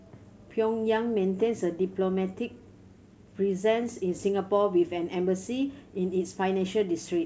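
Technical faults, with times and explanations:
No technical faults heard.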